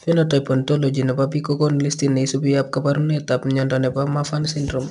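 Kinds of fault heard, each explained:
4-bit ADPCM compression: each sample is stored as a small 4-bit step from a predicted value, with the step size adapting as it goes, so the coding error becomes a hiss that rides along with the signal. Here it's plainly audible as grit on the louder speech, roughing up sharp onsets, and nothing comes through above 10.7 kHz, which points to a sample rate around 22 kHz at an 89 kbps stream.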